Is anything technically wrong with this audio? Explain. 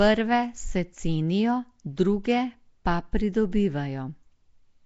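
Yes. Across the whole speech clip there is a rough, hissy halo around the voice and a smeared, underwater quality, with nothing above about 7.7 kHz. This is likely Nellymoser compression, the old Flash microphone codec, at a rate that fits 32 kbps. It spends a fixed small budget on each short block, so weaker bands get no bits and are refilled with noise. That noise fill sets it apart from a simple low-pass filter, which would only sound dull rather than hissy and smeared.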